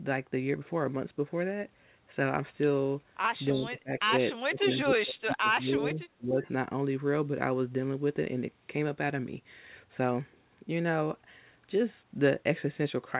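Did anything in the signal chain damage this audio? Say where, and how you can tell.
Yes, in call processing: speech sinks about 20 dB from 3.5 to 4.1 s and about 30 dB, in choppy stretches, from 4.42 to 6.47 s. This is likely speech suppressed in double talk, where the echo canceller ducks the talker along with far-end echo. A spectrogram shows faded, patchy harmonics, and the waveform shrinks in chunks.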